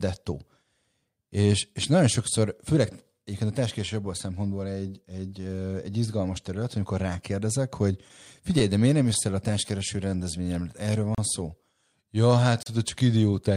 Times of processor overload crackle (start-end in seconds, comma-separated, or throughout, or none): none